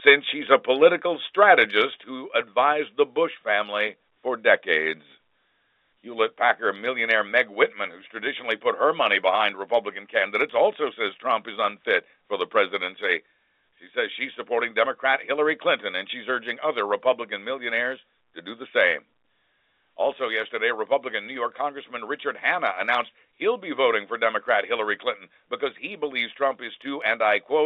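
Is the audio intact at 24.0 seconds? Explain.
Yes, at 24.0 seconds the speech runs on without any break or added damage, carried in the ordinary narrow telephone band of G.711 coding.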